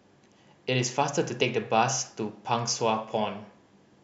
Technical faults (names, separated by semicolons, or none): none